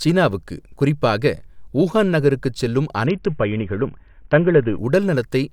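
At 3.06 s, right after "குறிப்பாக ஊஹான் நகருக்குச் செல்லும்", the speech shows a Bluetooth SBC bit pool drop lasting until 4.78 s. The link cut the encoder's bit allocation, which fits a bit pool falling from 31 to 6, near 55 kbps. The top sub-bands get few or no bits and the lower ones are quantised coarsely, so the treble goes dull and a gritty noise rides on the voice until the rate recovers.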